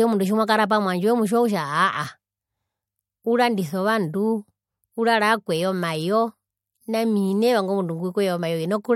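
Nothing stood out as faulty on listening to this speech recording.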